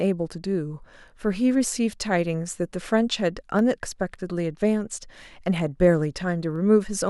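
Three sharp clicks punctuate the speech, at 1.93 s, 3.59 s and 6.56 s. Each is a single tick with no gap in the sound around it, and each shows up as a thin vertical line through the spectrum. The likely cause is dropped samples: a fraction of a millisecond goes missing from the stream, so the waveform leaps straight from one value to a later one, and that sudden step is what you hear as the click.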